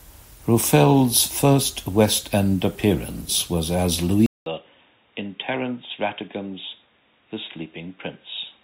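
Speech, with a clear change of sound partway through. Right after "appearance was as", at 4.26 s, the audio drops out for 200 ms. When it returns, everything above 3.8 kHz is gone, so the sound turns dull and boxy. The level falls by about 10 dB, and a faint new background noise sits far below the signal. It stays this way to the end. The likely cause is an input switched to a poorer device mid-recording, such as another microphone or a headset's call profile.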